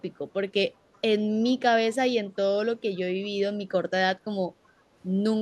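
Echo leak at 0.73 to 0.77, 0.93 to 1.0, 1.42 to 1.5 and 3.23 to 3.28 s: faint, brief scraps of the speech return about 374 ms late, far below the main level. They likely come from a far-end loudspeaker whose echo canceller let some of the picked-up sound through.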